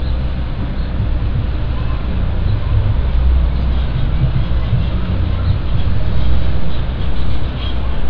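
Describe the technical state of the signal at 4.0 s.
At 4.0 s the signal is intact, with no audible technical fault at that point in the sound.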